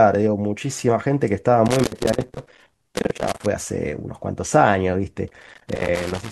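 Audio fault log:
1.66–3.46 s and 5.28–6.31 s, loose connector crackle: a worn contact in the signal path keeps making and breaking, chopping the speech into irregular scratchy bursts. On a waveform these show as jagged dropouts and spikes; a spectrogram shows scattered full-band vertical streaks.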